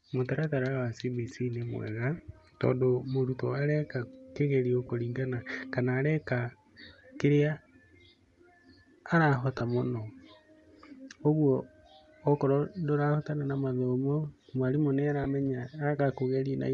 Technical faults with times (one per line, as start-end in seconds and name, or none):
0.00-16.74 Bluetooth LC3 compression
2.17-2.20 lost LE Audio frames
4.87-4.90 lost LE Audio frames
9.58-9.61 lost LE Audio frames
15.24-15.26 lost LE Audio frames